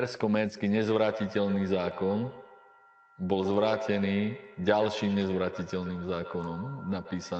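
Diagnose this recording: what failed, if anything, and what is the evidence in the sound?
From 0.57 s to the end, each phrase comes back at a fixed interval of roughly 150 ms, thinner and ringing, peaking about 10 dB below the speech. It is feedback echo between two devices in call processing: a second device replays the far microphone, outside any echo canceller's reach.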